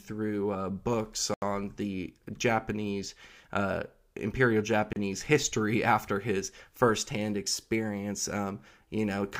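Just after "uh books", the speech drops out abruptly from 1.34 to 1.42 s, an 80 ms hole, and a shorter 31 ms gap follows at 4.93 to 4.96 s. Both are blocks of digital silence: runs of samples replaced by zeros with no fade in or out, the kind of gap left when an output buffer isn't filled in time.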